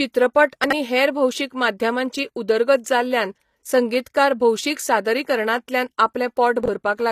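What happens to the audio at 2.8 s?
At 2.8 s the speech carries the plainly audible damage that runs through the whole clip, likely from HE-AAC compression at a bitrate around 24 kbps. Only the lower spectrum is coded directly. The treble is rebuilt by copying lower bands upward under a coarse envelope and stops near 14.9 kHz. Its harmonics don't line up with the real ones, so s sounds come out gritty, metallic or lispy.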